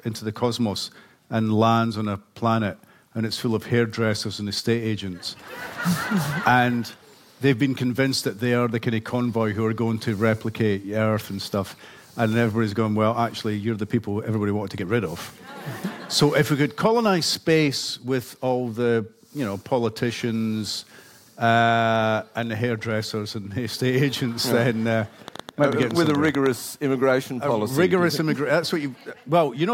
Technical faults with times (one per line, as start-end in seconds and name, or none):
25.28-26.47 train of clicks